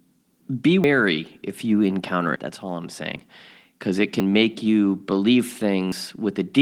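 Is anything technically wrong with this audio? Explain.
Yes. The speech jumps abruptly at 0.84, 2.36, 3.16, 4.2 and 5.92 s, with no gap of silence. These are likely dropped buffers (overrun), where unread audio was overwritten and the surrounding pieces were spliced together. Roughly a tenth of a second disappears at most points, and closer to 40 and 70 ms at 3.16 and 5.92 s.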